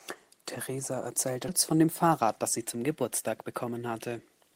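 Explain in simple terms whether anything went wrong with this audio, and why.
At 1.48 s the speech suddenly jumps forward, as if a moment had been snipped out. Roughly a third of a second of sound is missing, and the two sides are joined almost seamlessly, with no silence in between. This is a skip ahead. Later audio had already arrived and was waiting, so a stretch was dropped, either lost on the way or thrown out when the jitter buffer (the small holding area that smooths out uneven network delivery) overflowed.

From 1.71 s to 3.79 s the speech runs slightly fast, about 7% quicker than normal, while the pitch stays the same, so it sounds a little rushed rather than higher. This is a jitter buffer speed-up. The buffer was holding more audio than it wanted, which adds delay. To catch up, the receiver repeatedly trimmed tiny slivers of sound, cutting about 150 ms in total across that stretch.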